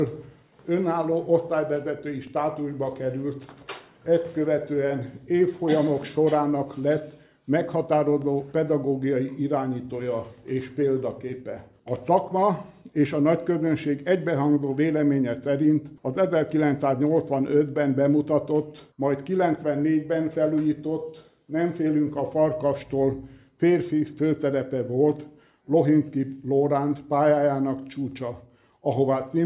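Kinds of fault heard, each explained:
No faults detected; nothing in the audio calls for remark.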